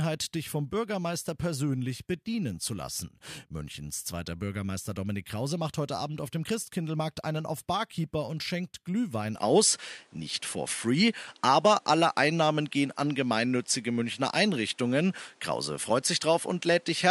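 At 9.36 s the speech abruptly turns duller, with nothing above 11.4 kHz, a level shift of about 5 dB and a faint new noise floor, until the end. There is no gap at the change, which is likely an input switched to a poorer device.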